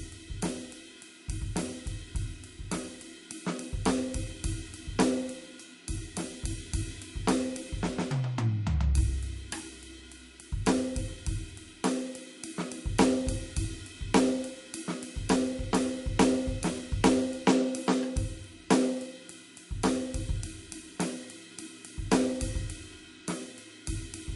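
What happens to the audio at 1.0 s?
At 1.0 s the music carries the same damage heard through the whole clip, most likely MP3 compression at a starved bitrate, which fits roughly 48 kbps. Short of bits, the encoder cut everything above about 11.2 kHz and dropped weak frequency lines that flicker on and off between frames. The result is a dull top end with plainly audible watery, swirling artefacts, metallic chirping on bright content, and smeared attacks.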